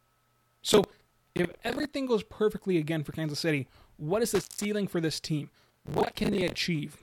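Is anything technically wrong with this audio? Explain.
Yes. From 0.73 to 1.85 s, ending before "goes perfectly again for", and again from 5.62 to 6.56 s, after "for this team", there is processor overload crackle. The processor misses deadline after deadline on buffers of roughly 10 ms, replaying stale audio with hard edges. It comes out as gritty tearing over the speech. A waveform shows dense small discontinuities, and a spectrogram shows broadband vertical streaks.

From 4.35 to 4.65 s, between "kansas city what is" and "for this team", an intermittent contact opens for about 150 ms. The speech drops out with crackle at each edge and faint hiss in the gap. The waveform collapses to near-flat between two sharp spikes.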